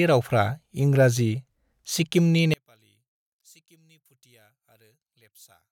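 Speech, with one channel likely inverted from 2.54 s to the end, so the mono sum cancels the shared sound, leaving only a faint trace about 36 dB quieter.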